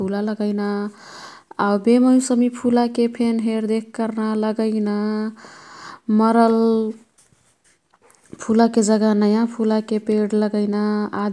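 Nothing in this speech recording sounds technically wrong at any point; no fault turns up anywhere along the way.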